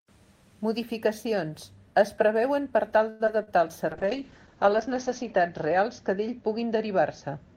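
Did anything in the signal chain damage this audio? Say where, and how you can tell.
Yes. Right after "es preveuen per tal", from 3.09 to 3.22 s, the sound stretches into a fading buzz or hiss for about 105 ms, then resumes where it stopped. That is a call audio freeze, likely network delay draining the jitter buffer. Unlike packet loss, nothing is missing; the audio is simply pushed later.

Shortly after, at 3.26 to 3.29 s and 3.43 to 3.49 s, there are brief smears where about 20 ms and 40 ms of audio are gone, patched by the decoder extending the preceding sound. This short concealed packet loss is a network fault. Unlike the freeze, real material disappears rather than arriving late.

From 3.92 s to the end, the speech turns rough and muffled as the top end falls from 20 kHz to 8 kHz, worst for about 1.1 s. The coarseness points to a call bitrate drop in the codec, roughly 32 kbps down to 8 kbps. 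Unlike loss or freezes, it is sustained rather than momentary.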